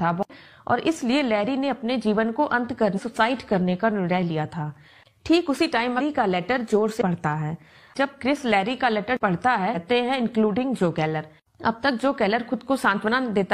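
Damaged data in a compressed stream strikes four times: 2.93 to 2.99 s, 5.95 to 6.01 s, 6.97 to 7.02 s and 9.71 to 9.76 s. At each point some bytes of the encoded stream are wrong, so the decoder misreads those frames, loses sync and hunts for the next valid frame header. Each event is heard as a brief chirp, squawk, click or short hole, about 48 to 64 ms long, cutting abruptly into the sound.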